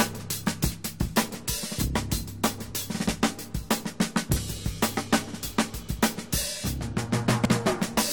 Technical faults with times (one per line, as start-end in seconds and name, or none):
0.71 compressed frames skipped
4.35 compressed frames skipped
5.98 compressed frames skipped
7.44 compressed frames skipped